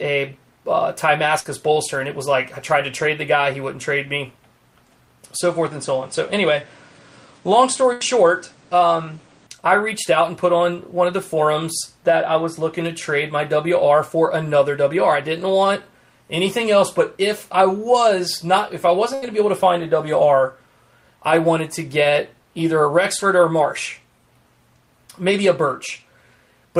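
Burst of packet loss at 1.39 to 1.47 s: about 53 ms of the last sound is stretched and faded over the gap, then playback skips ahead past 60 ms of missing audio. From 5.41 to 9.47 s the sound abruptly loses everything above 9.5 kHz and gains a noise floor about 30 dB down, with no level jump or silence. The likely cause is the input switching to a poorer device. Within that stretch, at 7.93 to 8.03 s, another burst of packet loss fills about 79 ms and drops 80 ms. A final burst at 19.15 to 19.24 s fills about 73 ms and drops 80 ms.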